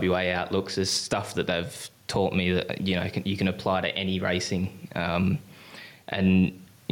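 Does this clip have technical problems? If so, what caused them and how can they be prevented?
Yes. Gain pumping runs through the whole speech clip. The room noise sits about 39 dB below the speech, and the gain swings by roughly 5 dB. Speech peaks sound flattened and the overall dynamics squashed. The likely cause is microphone gain set far too high, with a fast limiter or compressor repeatedly pulling the level down on loud passages. To prevent it, lower the input gain and slow the limiter's release.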